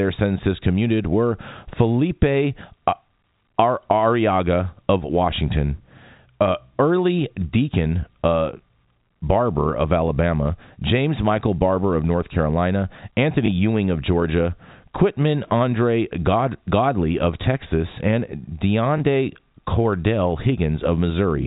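At 5.36–5.38 s, 13.46–13.48 s and 18.98–19.00 s, packet loss with the last packet repeated fills each 20 ms gap, which fits one lost packet, with a replayed copy heard as a small blip within the G.711 telephone band.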